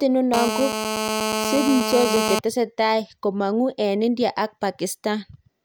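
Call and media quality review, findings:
GSM phone buzz, 0.34–2.39 s: hard, raspy 217 Hz buzz, dense harmonics, about 3 dB below speech, steady throughout. Nearby 2G handset on a call; audio input stage rectifying its transmit bursts. Distinct from smoother 50/60 Hz mains hum.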